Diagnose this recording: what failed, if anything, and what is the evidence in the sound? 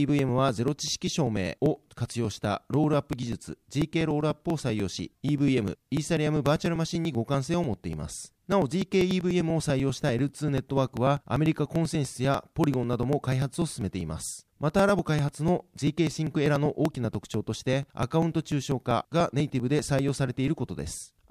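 The fault is at the driver or buffer stage: periodic USB or driver dropouts. From about 0.09 s to 21.16 s there's a steady run of small ticks, one every 0.098 s, so roughly ten a second and a couple of hundred in all, heard only while the speech is sounding. Each time, something blocks the bus or driver, and a couple of milliseconds of audio get skipped outright. The splice leaves a tiny discontinuity in the waveform, which is the tick.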